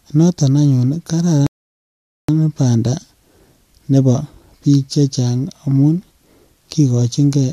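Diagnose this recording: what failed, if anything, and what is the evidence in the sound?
A rebuffering stall at the playback stage: the player drained its downloaded audio and halted until more data arrived. Right after "noton anyun ii", the speech drops to silence from 1.47 to 2.29 s, then resumes exactly where it stopped, adding 0.82 s without losing any material.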